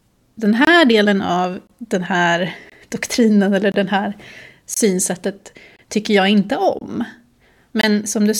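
Gap between chunks at 0.65–0.67, 1.67–1.70, 2.70–2.72, 3.72–3.74, 4.74–4.77, 5.77–5.79, 6.79–6.81 and 7.81–7.83 s: the speech arrives in 1.0 s pieces, and about 23 ms of silence is inserted at each join. Nothing is lost, but the flow breaks with short holes roughly once a second.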